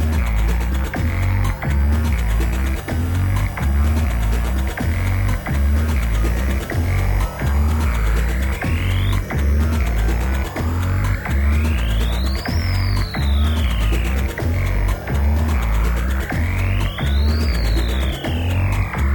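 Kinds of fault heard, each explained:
Nothing here stands out as a technical fault; the audio just rolls along without any glitches, dropouts or odd noises to point to.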